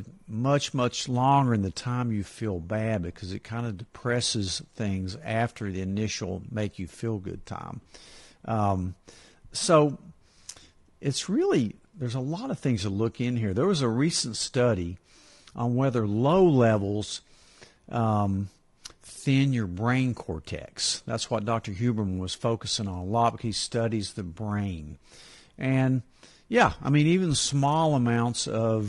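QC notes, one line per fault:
Throughout, low-delay AAC compression: the speech sounds plainly rough and grainy, with noise between harmonics, likely from short-frame coding at a low rate around 32 kbps.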